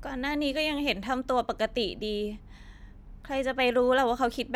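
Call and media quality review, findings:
No faults found in this speech recording.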